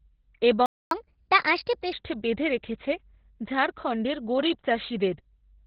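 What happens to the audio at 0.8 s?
At 0.8 s you're right in the middle of a playback stall: the speech cuts to silence from 0.66 to 0.91 s, about a quarter of a second, then picks up again. That's most likely the player running dry or its thread getting blocked.

Underneath, the whole clip carries heavy Opus voice compression. It sounds like the SILK speech coder in narrowband mode, with nothing above about 4 kHz, so the speech comes out muffled, hoarse and a bit robotic. That fits a bitrate somewhere around 8 kbps.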